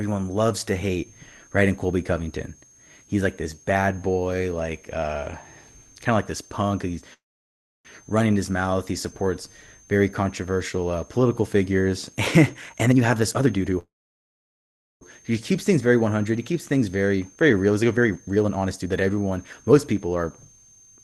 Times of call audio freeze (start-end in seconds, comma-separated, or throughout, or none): 7.13-7.87, 13.79-15.03